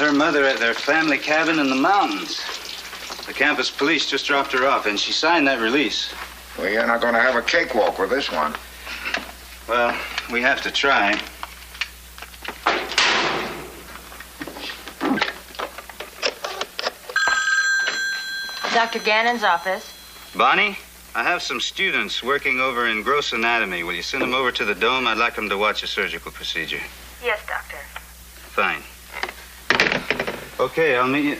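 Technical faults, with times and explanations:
Nothing here stands out as a technical fault; the audio runs along without any glitch worth pointing to.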